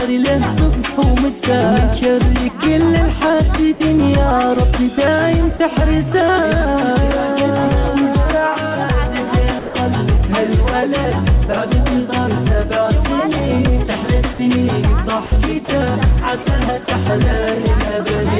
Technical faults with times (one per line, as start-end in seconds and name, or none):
3.74-3.80 sound dropped by the voice detector
5.57-5.60 sound dropped by the voice detector
9.59-9.74 sound dropped by the voice detector
14.33-14.39 sound dropped by the voice detector
15.26-15.32 sound dropped by the voice detector
15.65-15.68 sound dropped by the voice detector
16.43-16.46 sound dropped by the voice detector
16.85-16.88 sound dropped by the voice detector